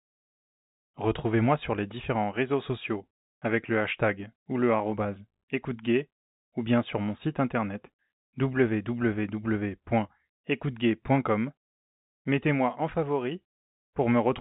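Listening through this telephone-band speech, which carries nothing above about 3.8 kHz as G.711 coding does, nothing stood out.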